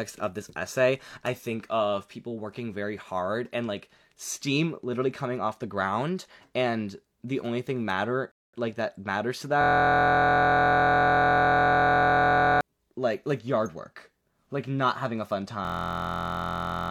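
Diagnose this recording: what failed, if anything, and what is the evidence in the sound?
A rebuffering stall at the playback stage: at 8.32 s the speech cuts to silence for about 0.22 s, then resumes from exactly where it stopped. The waveform shows a flat gap and the spectrogram a blank vertical band. Time is added and nothing is lost.

A system hang loop in the driver or buffer stage: from 9.61 to 12.61 s and again from 15.65 s to the end at 16.90 s, a 23.22 ms slice repeats at 43.1 Hz. This produces a steady buzz, consistent with a 1024-sample buffer, and replaces roughly 3 s and 1.5 s of speech. The waveform shows identical repeating cycles, and the spectrogram shows stacked horizontal harmonics spaced 43 Hz apart.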